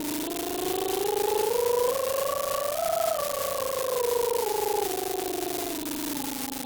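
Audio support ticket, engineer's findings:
Steady crackle/fizz across whole music clip, continuing through quiet passages. Unreliable data bit: one marginal data line flips randomly, each error a fixed step of about -13 dBFS. Waveform: uniform-height spikes scattered throughout. Spectrogram: broadband speckle, constant level, independent of programme.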